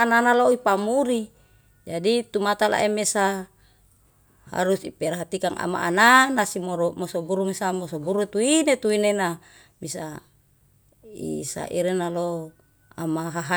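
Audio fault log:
No technical faults are audible in the signal anywhere in the clip.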